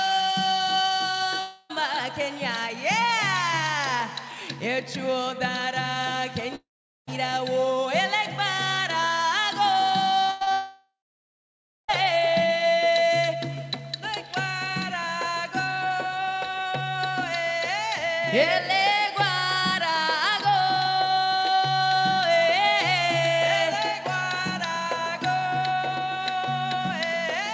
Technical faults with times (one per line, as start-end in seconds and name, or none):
1.40-1.71 long network dropout
6.55-7.09 long network dropout
10.26-10.52 repeated packet loss (robotic sound)
10.52-11.90 long network dropout